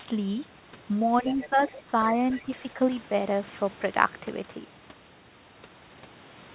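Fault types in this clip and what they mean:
Speech suppressed in double talk: When both ends talked at once, the echo canceller likely could not tell the near talker from loudspeaker echo, so it pulled the whole signal down. Between 1.22 and 1.93 s the speech sinks by up to about 15 dB, for roughly half a second in total. A lighter dip of about 5 dB, lasting around a tenth of a second, follows between 2.42 and 2.78 s.
Other side's voice leaking through: Far-end audio from the loudspeaker was likely not fully cancelled at the microphone, so a second voice rides under the speech in short scraps. The strongest scrap sits about 15 dB below the talker, from 1.27 to 1.49 s. A brief trace at about 25 dB down comes at 1.69 to 1.73 s, and another at about 20 dB down at 2.31 to 2.42 s, just before the second dip.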